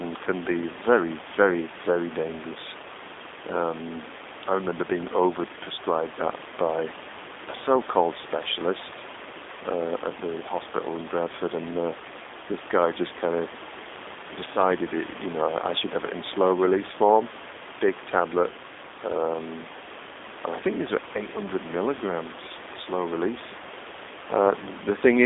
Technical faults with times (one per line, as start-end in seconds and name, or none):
0.00-25.25 G.729 codec